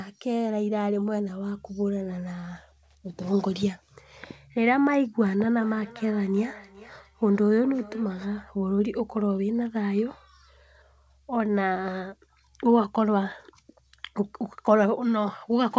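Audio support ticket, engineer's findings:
Feedback echo between two devices, 5.54 to 8.37 s. The speech comes back roughly every 0.4 s, getting thinner and ringier, peaking about 20 dB under the talker. Another device in the room is replaying this mic and being picked up again, which local AEC can't cancel. Band stops at 8 kHz, consistent with G.722 wideband.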